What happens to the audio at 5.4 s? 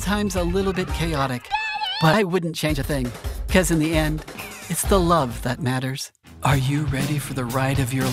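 A jitter buffer speed-up runs from 4.93 to 5.86 s. The receiver held too much audio, so it cut short pitch-period pieces repeatedly, about 50 ms in total. The audio plays at 106% speed with unchanged pitch and sounds hurried.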